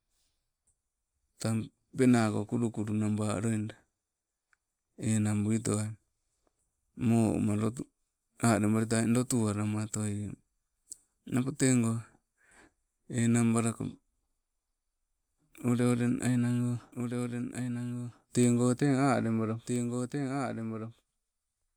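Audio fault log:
16.92 s to end, doubled audio track: A second copy of the speech enters abruptly and runs to the end. It trails by about one and a half seconds, about 5 dB quieter, full-band and dry. A slower capture path likely records the same sound twice.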